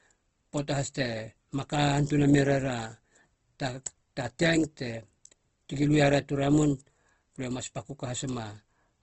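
Opus compression shapes the speech from start to finish, and the damage is plainly audible. The sound is rough and grainy, with the fine detail of the voice replaced by a noisy texture. Nothing survives above 8.2 kHz, which fits a low bitrate around 16 kbps in the codec's music mode. The likely cause is band energy being kept while missing detail is filled with noise. A spectrogram would show a hard ceiling at 8.2 kHz and smeared, speckled upper bands.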